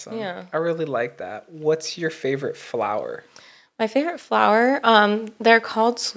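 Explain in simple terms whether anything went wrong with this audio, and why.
Automatic gain rising: the call's level control thought the speech was too quiet and kept turning it up, so everything swells from 0.1 to 3.08 s, then again from 3.92 to 6.05 s.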